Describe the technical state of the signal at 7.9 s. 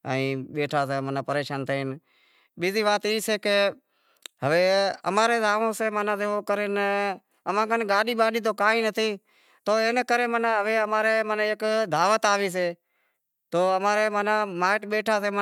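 At 7.93 s a single compressed frame arrived with flipped bits and was decoded anyway; this corrupt frame decoded as a brief, fairly loud chirp-like blip, peaking around -15 dBFS.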